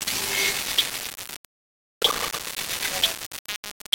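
Low bit depth without dither runs throughout the clip: the sound is held to about 3 bits, likely rounded to the nearest step with no dither, so the error, nearly as loud as the signal, tracks it as coarse, shifting grit while the quietest moments collapse into silence or sputter.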